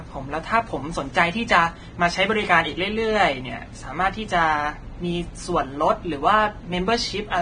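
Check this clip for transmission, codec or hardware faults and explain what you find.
One codec fault runs through the whole speech clip: heavy Vorbis compression.

Throughout the clip, the speech sounds hissy and grainy, with rough tones and softened consonant attacks. Nothing is present above 9.7 kHz, a hard cut-off that fits a low bitrate around 23 kbps. The likely cause is an encoder lowering its bandwidth and quantising the remaining treble so coarsely that the detail turns into noise. A spectrogram would show a flat ceiling at 9.7 kHz and speckled, smeared energy below it.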